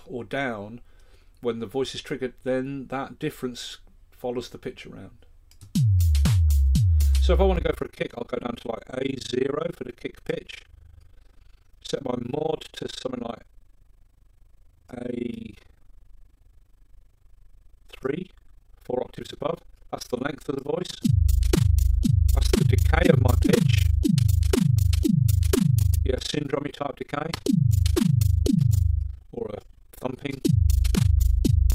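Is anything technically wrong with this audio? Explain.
Yes. From 7.56 s to the end there is overlap-add ripple. The audio was split into windowed frames and rejoined with an overlap whose windows don't add up to a steady gain, so the level dips once per frame. The swing is deep, about 60 dB, at around 30 times a second, which sounds like a harsh, robotic flutter. On a waveform the envelope looks comb-like and pulsed. A spectrogram shows regular vertical gaps striping every frequency band.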